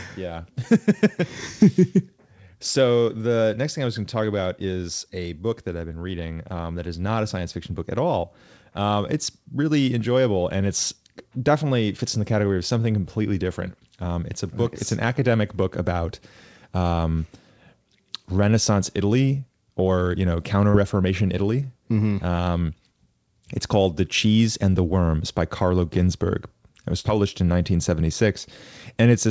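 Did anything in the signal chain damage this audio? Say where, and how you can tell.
Yes: short concealed packet loss at the network stage, at 20.70 to 20.76 s, right after "or you know", and at 27.00 to 27.04 s, just before "published in". Each spot has a brief smear or wobble where roughly 40 ms, then 20 ms, of audio never arrived in time. The receiver's concealment extended the preceding sound, pitched if voiced, noise-like if not, then crossfaded back into the real signal. The 8 kHz band limit fits the G.722 call codec.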